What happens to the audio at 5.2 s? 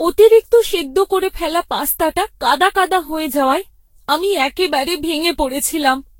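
At 5.2 s you're hearing the same generation loss that runs through the whole speech clip: swirly, hollow smearing with blurred consonant attacks and nothing above 16.6 kHz. That likely comes from around fifteen lossy re-encodes, fitting Vorbis at about 63 kbit/s, each pass stacking fresh quantisation damage.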